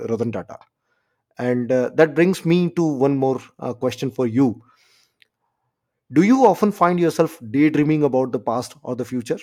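No technical faults can be heard anywhere in this recording.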